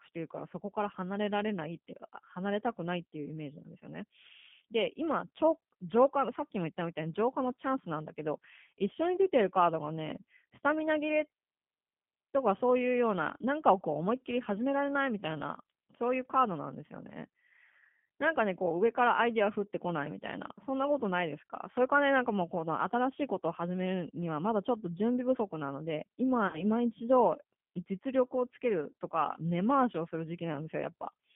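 From start to finish the speech carries G.729 codec damage, consistent with an 8 kbit/s G.729A stream. The audio is confined to roughly 150 Hz to 3.5 kHz, with nothing above that band, and the codec's reconstruction is plainly audible. Because each 10 ms frame is rebuilt from a vocal tract filter, a pitch predictor and a handful of pulses, the voice comes across rough and faintly synthetic rather than natural.

From 26.47 to 26.66 s there is VoIP packet loss concealed by the speech codec. About 60 ms of audio went missing, which fits two lost packets. The decoder filled the gap by extending its last pitch and filter state with decreasing gain, so the sound smears into a stretched, fading sound. Since each frame builds on the previous one, the speech stays weak and distorted for a short while after the packets resume. A second, shorter loss occurs from 28.91 to 28.93 s, with about 30 ms concealed, consistent with a single packet. 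It produces the same brief stretched smear and dip in level.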